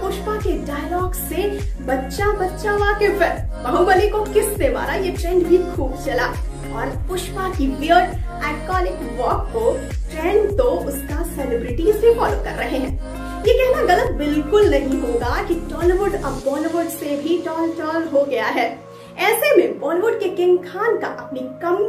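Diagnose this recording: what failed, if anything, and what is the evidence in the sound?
Skips at 12.90 s and 14.07 s. The sound jumps ahead about 20 ms, then 10 ms. Likely a dropped buffer (overrun), with the hardware overwriting samples before they were read.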